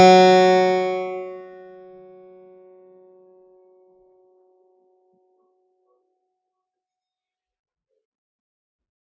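From start to finish the music pumps and flutters: each attack comes through, but held tones and their tails sink away, so the level swings by about 20 dB and the sound keeps thinning out between hits. This is a noise suppressor applied to music, a speech-oriented suppressor left running that mistakes sustained notes and decaying reverb for background noise and pulls them down, on top of the call microphone processing that limits the band to 8 kHz.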